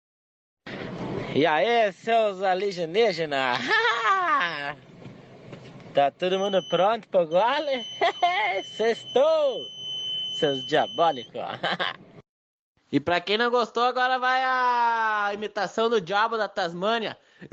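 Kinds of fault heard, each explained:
pre-emphasis left on: from 2.12 to 6.47 s the sound turns thin, bright and sibilant, about 10 dB too strong at 10 kHz, fitting an uncorrected 50 µs FM treble boost.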